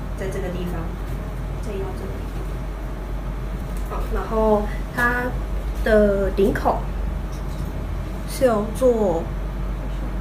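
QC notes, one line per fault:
Nothing here to flag, as the audio comes through without any technical faults that a listener would catch.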